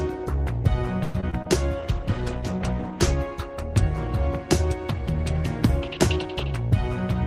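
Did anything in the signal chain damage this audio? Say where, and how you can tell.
Yes. At the network stage, repeated packet loss from 1.03 to 1.47 s left four gaps, the longest 110 ms, patched by stretching earlier sound, so the audio turns choppy and robotic.

In the codec, a call bitrate drop from 1.79 to 3.25 s makes the sound rough and muffled, consistent with the encoder falling from about 40 to 15 kbps.

In the receiver's jitter buffer, a speed-up from 6.36 to 6.83 s trims a few tens of milliseconds of pitch periods, so the sound runs about 7% faster at the same pitch.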